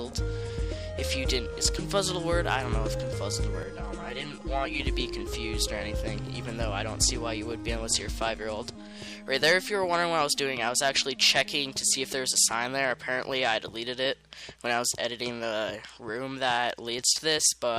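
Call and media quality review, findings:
Channel delay (comb filtering), 3.63 to 4.80 s. Hollow, phasey sound with fixed spectral notches. One channel lags the other by roughly 5 ms before mono summing. First notch near 100 Hz, then repeating every 200 Hz. Probable component: stereo downmix path.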